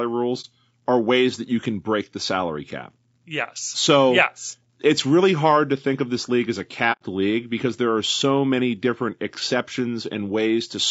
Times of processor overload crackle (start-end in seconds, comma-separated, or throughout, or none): none